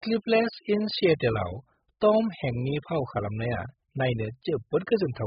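From start to end, the speech is dull and band-limited. Nothing is present above about 5.1 kHz. Sibilants are smeared and fizzy. Sustained sounds carry a warbling, watery texture. The damage is heavy. The likely cause is AAC compression, AAC-LC at a very low bitrate, around 8 kbps. With so few bits, the encoder drops the top of the spectrum. It quantises the remaining bands coarsely, leaving gaps and noisy fill.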